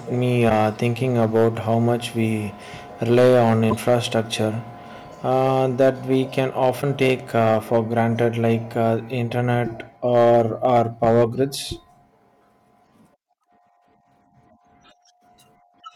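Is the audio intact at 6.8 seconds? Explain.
No. Between "uh that we can" and "take uh for granted", from 6.81 to 6.83 s, the sound jumps forward. This is most likely a broken MP3 bit reservoir. An MP3 frame can store some of its data in space borrowed from earlier frames. When a frame goes missing, the next one reads bytes that belong to another frame. The span is about 28 ms, which fits the loss of a single 26 ms frame.

Hard clipping is also present at this moment, because it runs through the whole clip. The signal is driven about 7 dB past what the chain can pass, so the loudest peaks are sliced flat. Only a small share of samples is affected, around one or two percent. The flattened tops add high harmonics, which are heard as a rough crackle on peaks.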